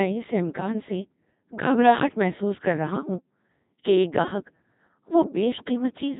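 From start to finish the speech sounds robotic and buzzy, as if assembled from tones rather than recorded. That is the Codec 2 vocoder, heavily degrading the sound at a very low rate, which fits its 2.4 kbit/s mode. Instead of the waveform, Codec 2 sends only pitch, voicing, level and a rough spectral outline, and the decoder rebuilds the speech from sine waves. The natural texture of the speech is lost.

From 0.60 to 0.74 s, just before "سے گھبراہٹ محسوس کر", the synthetic speech lurches into a short warbling bleep, with pitch, level and tone colour jumping abruptly. At 2.90 to 3.06 s, just after "سے گھبراہٹ محسوس کر", a longer burst turns into garbled robotic gibberish. These are bit errors on digital voice radio. Flipped bits, around a few percent, corrupt the parameters that set pitch, level and spectrum for entire frames. The first burst sounds like a couple of frames going wrong, the second like several in a row.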